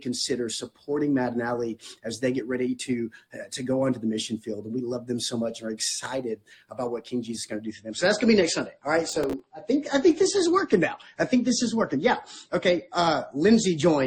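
From 7.64 s to the end the audio drops to a lower-bitrate stream, an adaptive switch from MP3 at 128 kbit/s to 33 kbit/s after the connection slowed. Everything above 8.3 kHz vanishes and codec artefacts thicken. Unlike a network dropout, the change is abrupt but leaves no gap or stall. Between 9.09 and 9.40 s there is processor overload crackle. Around ten very short buffers, each roughly 5 ms, miss their deadlines and replay stale audio with hard edges, giving a gritty tearing. Unlike clipping, it doesn't track loudness and stops once the load clears.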